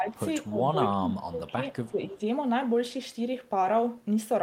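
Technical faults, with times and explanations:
0.00–0.17, 0.49–0.60, 0.91–1.57 and 1.84–2.21 s, speech suppressed in double talk: the speech dips by about 10 to 20 dB, deepest in the 0.91–1.57 s stretch, likely because the echo canceller confused near-end talk overlapping the far-end sound with echo. It shows as hollowed waveform envelopes and faded spectrogram bands.
1.74–2.12 s, echo leak: a faint copy of the speech returns 258 ms late, roughly 30 dB below it, likely residual loudspeaker pickup the echo canceller missed. On a spectrogram it appears as weak, time-shifted harmonic traces trailing the original.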